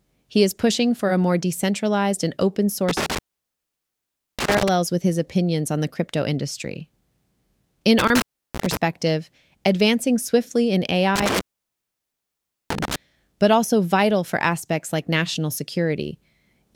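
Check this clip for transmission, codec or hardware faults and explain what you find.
There's an intermittent contact fault, three dropouts where a loose cable or plug briefly opens. From 2.89 to 4.69 s, right after "more decentralized and open", the speech cuts out for about 1.2 s before "with his opinions on". A shorter one at 7.99 to 8.77 s opens for about 0.33 s. From 11.16 to 12.96 s, after "advancing swiftly in", it's open for about 1.3 s before "but also vital for". Each gap has crackle at the edges and faint hiss inside while the connection's broken.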